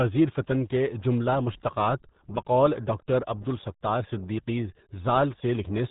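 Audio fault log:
Throughout, RealAudio 14.4 codec: speech sounds muffled and gargly, nothing above 3.8 kHz, heavy damage consistent with an 8 kbit/s dial-up speech codec squeezing the signal.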